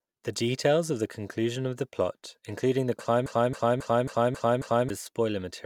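A stalled player or stream, the likely cause, kept resending its last fragment, producing a broken-record loop in this speech. After "the plot including the", a 0.27 s piece repeats six times from 3.26 to 4.90 s, replacing the speech that should have played.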